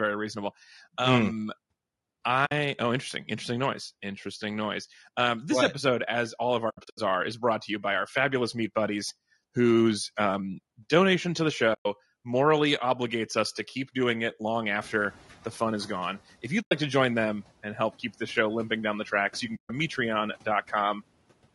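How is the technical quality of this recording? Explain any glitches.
The recording has three kinds of problems: constant coding damage, five short dropouts, and a noise reduction that briefly falls behind.

Throughout, the speech sounds rough and grainy, with a hiss-like fill between the harmonics and a top band that sounds thin and somewhat synthetic. The likely cause is low-delay AAC compression, the AAC-ELD codec used in video calls, running at around 32 kbps. Its short frames cannot separate closely spaced pitch harmonics well, so at this bitrate the encoder smears noise between them and approximates the highs.

Soft-edged holes interrupt the speech at 2.45–2.52 s, 6.69–6.99 s, 11.73–11.86 s, 16.61–16.72 s and 19.55–19.70 s. These are AAC frame loss with muting. The holes last about 60, 120, 100 and 140 ms, consistent with losing runs of roughly 20 ms frames. The 6.69 s event is a broken stutter of gaps over about 280 ms, the longest near 70 ms. 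When frames are missing, the decoder zeroes their spectrum, and the overlapping windows fade the sound out and back in.

Around 15 s, the background room noise jumps by about 23 dB. The room noise itself is part of the recording, and it stays about 26 dB under the speech. From 14.81 to 16.22 s the noise suppressor is catching up: the new noise passes through with little reduction at first. Over roughly 1.4 s it sinks by about 8 dB as the suppressor's noise estimate adapts to the higher level.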